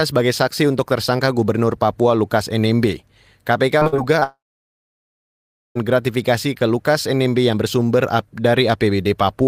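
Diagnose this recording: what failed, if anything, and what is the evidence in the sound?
The failure is at the network stage. Between 3.79 and 4.23 s the speech turns choppy, with repeated packet loss producing four short holes, the longest about 50 ms. The receiver patches each hole by extending the preceding sound, so roughly a quarter of that 0.44 s stretch is synthetic fill, and about 120 ms of real audio never arrives. The closely spaced gaps give the broken, choppy texture.

Right after that, from 4.23 to 5.77 s, the audio cuts out entirely for about 1.5 s, most likely a long network dropout. A brief concealment tail carries the last sound forward before fading, and then roughly 1.4 s of near-silence follows. The speech resumes at "gratifikasi ke" with the lost section simply missing rather than delayed. The packet loss immediately before it suggests the link degraded and then stalled completely.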